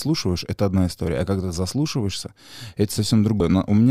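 A speech recording with one glitch near the end: at 3.39 to 3.41 s the audio lurches forward, as compressed frames are skipped. Something like a tenth of a second of sound just isn't there, which points to a handful of whole frames, maybe four, of about 23.2 ms each, dropped or rejected by the decoder.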